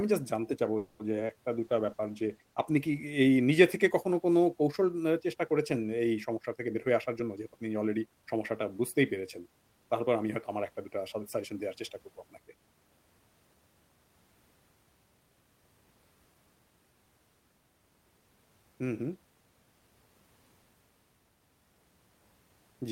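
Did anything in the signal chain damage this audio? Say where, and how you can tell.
Yes. Call audio freeze, 0.77 to 1.01 s: the sound stalls into a fading continuation of the last sound for about 220 ms, then resumes where it stopped, with nothing lost. This is likely a network hold-up that emptied the jitter buffer, adding 220 ms of delay.

Short concealed packet loss, 1.11 to 1.14 s and 1.27 to 1.35 s: brief smears where packets missed the decoder. The receiver extrapolated from the preceding audio and crossfaded back, so each hole becomes a short wobble, the second stretching the timing by roughly 20 ms.

Call bitrate drop, 1.53 to 3.20 s: the sound turns coarse and dull as the network-driven bandwidth estimate pushed the Opus encoder from 32 kbps down to 17 kbps, holding the lowest rate for 1.6 s, which strips high-frequency detail until the rate recovers.

Jitter buffer speed-up, 6.56 to 8.23 s: the speech runs at about 113% speed with unchanged pitch. 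The receiver's buffer had overfilled and repeatedly cut out pitch-period-sized slices, about 200 ms in total, to bring the delay back down, which makes the delivery sound hurried.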